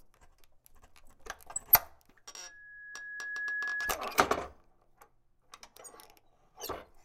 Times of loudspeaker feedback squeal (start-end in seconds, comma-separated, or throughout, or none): 2.43-3.97